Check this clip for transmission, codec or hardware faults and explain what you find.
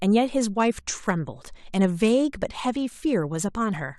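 One fault runs from 0.51 s to the end of the speech: a Bluetooth SBC bit pool drop. The treble goes dull and a gritty, grainy noise rises under the voice. The phone cut the SBC bit pool, a drop from about 28 to 12 by the sound of it, and 96 kbps fits what is heard. With so few bits the highest sub-bands are starved or emptied and the remaining bands are coarsely quantised, so the quality never recovers in this clip.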